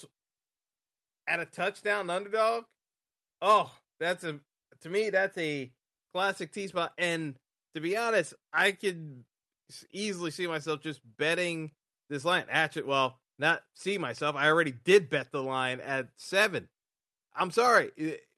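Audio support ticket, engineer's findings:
No audible faults found.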